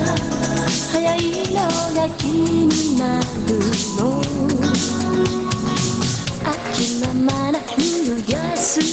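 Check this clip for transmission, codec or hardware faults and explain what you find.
One fault runs through the whole clip: gain pumping, heard as the level breathing with the loudness of the sound.

Throughout, the gain swings by around 10 dB. This is likely input gain set far too high, with a fast limiter or compressor clamping down on every peak and releasing in the pauses. Loud and quiet passages end up squashed toward one level. On a waveform the envelope looks flattened, with the noise floor rising between peaks. On a spectrogram the background band darkens under each loud event and brightens again in the gaps.

The spectrum stops at 8 kHz, which fits a wideband call codec such as Opus at a low bitrate and is not a fault.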